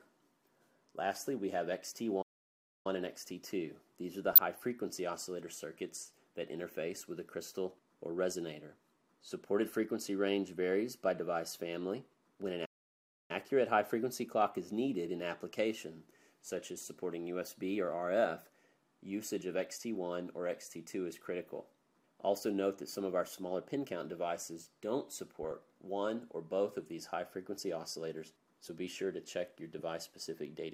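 Two faults stand out. First, a couple of playback stalls: the audio drops out mid-flow from 2.22 to 2.87 s and again from 12.65 to 13.31 s, each gap about 0.63 to 0.64 s long. That's most likely the player running short of data or its thread getting blocked. Second, there's DAB burbling at 4.31 to 4.64 s, 25.43 to 25.52 s and 29.79 to 29.82 s. It's short blips of noise in single sub-bands. It comes from weak reception letting a small fraction of a percent of bit errors slip past error correction into the MP2 data, which corrupts samples and scale factors.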